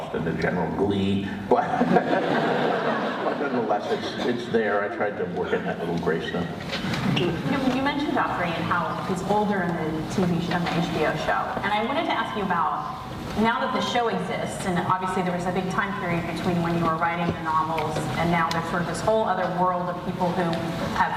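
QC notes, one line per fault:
No faults are present; nothing in it points to a problem in the capture or transmission chain.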